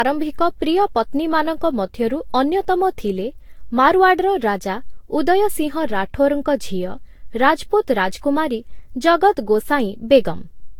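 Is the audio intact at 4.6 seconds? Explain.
No. At 4.6 seconds, as across the whole clip, the speech sounds swirly, smeared and hollow, with blurred consonant attacks and nothing above 19 kHz. This is likely generation loss: repeated lossy re-encoding, consistent with about seven Vorbis passes near 68 kbit/s, each requantising on a shifted frame grid.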